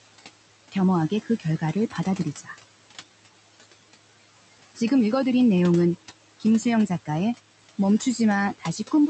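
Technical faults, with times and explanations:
Throughout: noise suppressor artifacts. The room noise is pulled down by about 17 dB between phrases and returns under speech.
1.1–1.75 s and 2.35–2.55 s: speech cut by the noise suppressor. Quiet speech was treated as noise and dropped by up to about 11 dB and 12 dB, leaving brief swallowed, faint sounds.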